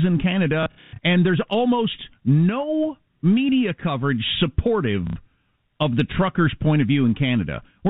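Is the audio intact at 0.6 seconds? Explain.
No, not quite: packet loss with last packet repeated kicks in at 0.63 s and runs to 0.99 s, just before "and there's almost no". About 240 ms went missing, and the receiver kept replaying the last good packet, so the runs stutter robotically.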